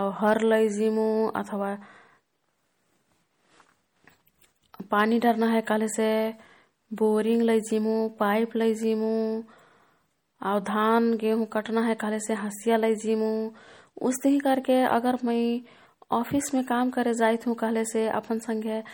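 From the start, the whole clip has a clearly audible watery, swirly quality with smeared attacks, likely MP3 compression at a low bitrate, something like 48 kbps. At 0.27 to 0.33 s, just before "लैजिमु अथवा", there's hard clipping: the peaks were pushed about 2 dB past what the stage could pass and got squared off, giving a brief crackle.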